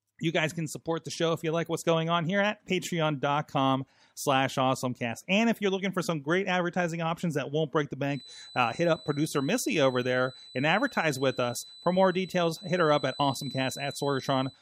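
From 8.04 s to the end of the speech, a thin whistle near 4 kHz sits roughly 20 dB under the sound, swelling and fading slowly in level. This feedback whistle likely comes from a loudspeaker-to-microphone loop held just short of instability. Unlike a runaway howl, it never builds up.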